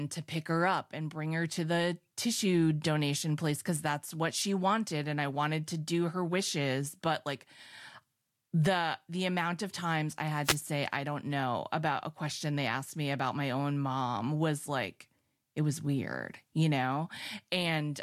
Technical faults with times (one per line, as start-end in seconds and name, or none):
3.74-3.78 wireless microphone noise hit
10.43-10.57 wireless microphone noise hit